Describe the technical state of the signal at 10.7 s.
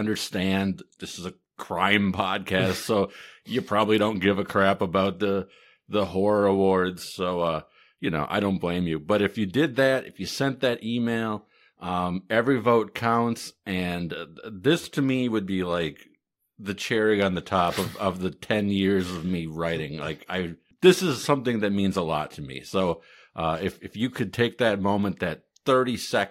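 Nothing is wrong with the signal at 10.7 s; the speech there comes through intact, with no dropout, distortion, glitch or other fault at that point.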